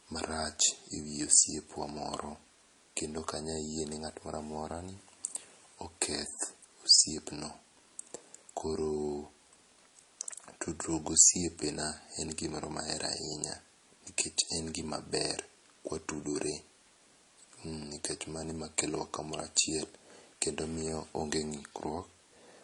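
Throughout the speech, the audio shows the layered damage of transcoding between lossy codecs. The likely cause is an MP3 encode at a low rate, around 40 kbit/s, later re-encoded as HE-AAC at a similar rate. Nothing remains above 11.9 kHz, the lowest cut-off in the chain. The second encoder spends its limited bits on the first one's artefacts and adds its own, so both sets of artefacts sit on top of each other.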